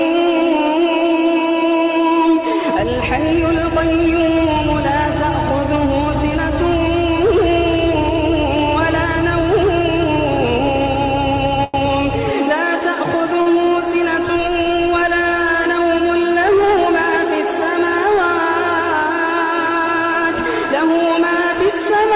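At 11.64 s and 13.42 s, a short stall from a late packet holds the sound about 97 ms and 41 ms, with nothing lost but a sound held too long with a slight buzz or dip.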